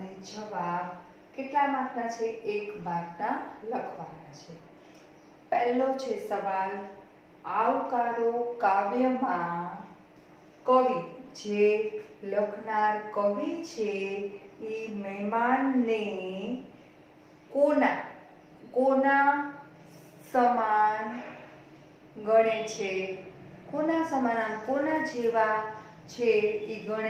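No technical faults can be heard anywhere in this audio. Nothing in it marks a point where the signal path went wrong.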